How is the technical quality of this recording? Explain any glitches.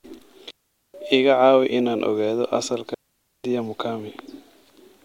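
The recording has two digital wireless dropouts in the speech. The first runs from 0.51 to 0.94 s, a mute of about 0.43 s. The second runs from 2.94 to 3.44 s, lasting about 0.50 s. In each case the wireless receiver lost too much data and muted the output with a very quick fade. The result is a clean gap of near silence. No crackle or noise burst comes before or after.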